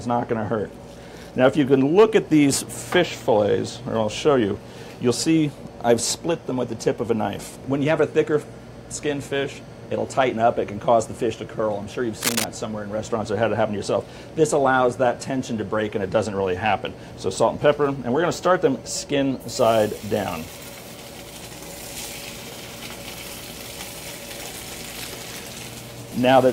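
From 12.22 to 12.46 s there is cable scratch noise, most likely from a worn cable, connector or control carrying a DC voltage being moved, so that its contact resistance jumped about rapidly. That changing resistance injects dense, irregular bursts of noise into the signal for roughly a quarter of a second, at about the same level as the sound itself. It comes across as a brief scratching, rustling disturbance laid over the audio.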